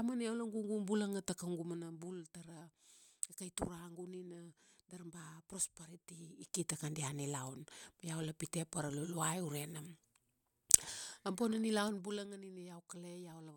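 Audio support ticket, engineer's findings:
Zipper noise, 6.04–6.78 s (roughly 10 dB rise) and 11.80–12.35 s (roughly 15 dB drop): gain stage stepping 2 dB at around ten steps a second, unsmoothed, each jump ticking audibly over the speech.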